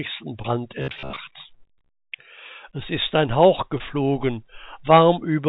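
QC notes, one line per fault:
0.42–0.46 s and 3.78–3.81 s, short concealed packet loss: each time about 20 ms of audio arrived too late to decode. The receiver bridged the hole by extending the preceding sound for 15 to 18 ms, then cross-faded back, leaving a brief smear or wobble.
0.82–1.18 s, robotic sound from repeated short buffers: a rigid metallic buzz at 66.8 Hz sits over the sound. That pitch corresponds to a period of about 15 ms, likely from a starved buffer replaying its last 15 ms slice while about half the real audio is skipped.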